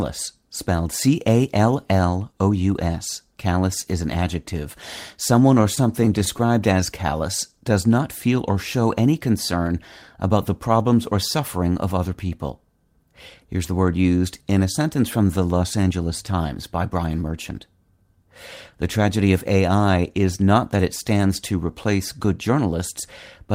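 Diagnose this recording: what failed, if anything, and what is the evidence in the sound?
The network stage failed. Packets arrived late or more slowly than they were played out, so the jitter buffer repeatedly ran dry, producing repeated stalls (stutter) between 5.61 and 6.49 s. Across ten short gaps, the longest 17 ms, the receiver extended the last sound to cover 107 ms in total, about 12% of that stretch, while losing nothing. The speech there drags and stutters instead of dropping out.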